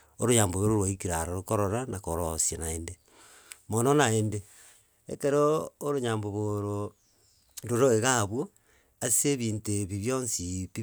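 Nothing in this speech recording stands out as a technical fault; there's nothing here worth flagging.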